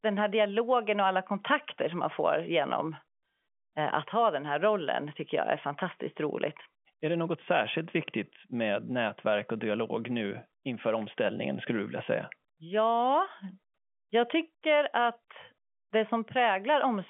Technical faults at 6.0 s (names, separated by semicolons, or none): none